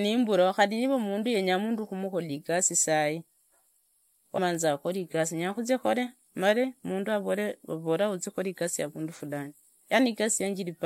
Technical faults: damaged data in a compressed stream

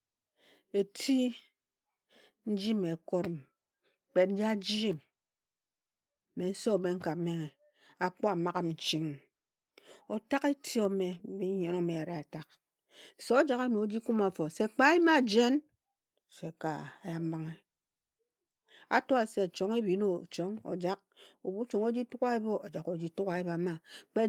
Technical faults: short concealed packet loss; lost packet rebuilt from error correction

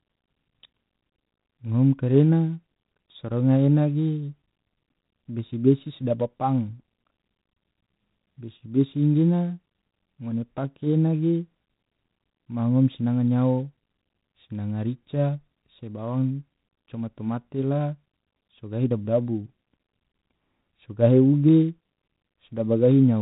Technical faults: G.726 ADPCM

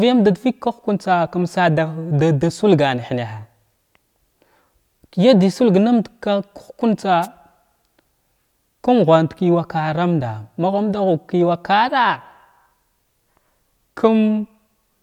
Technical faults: wireless microphone noise hit

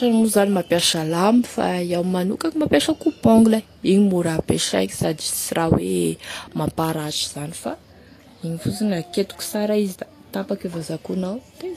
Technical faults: Vorbis compression

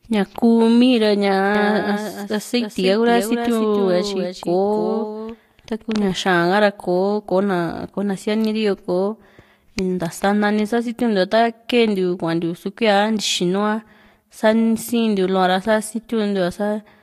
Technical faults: doubled audio track

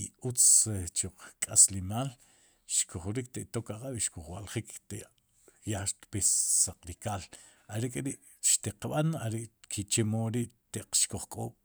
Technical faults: none

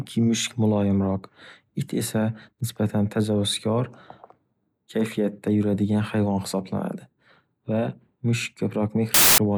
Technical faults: file tags played as audio

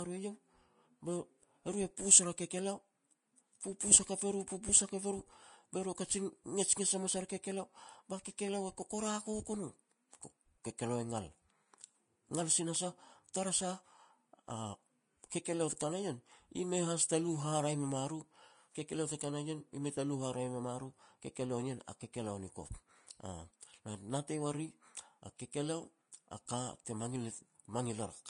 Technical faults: Vorbis compression

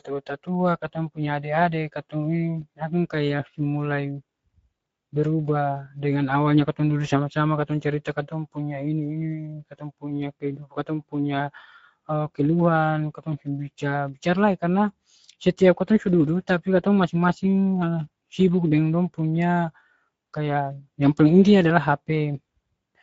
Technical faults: Speex codec

